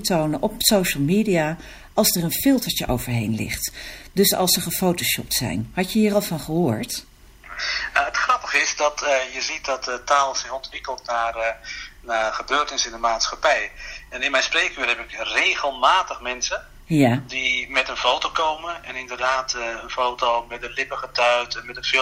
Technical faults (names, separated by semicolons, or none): timecode bleed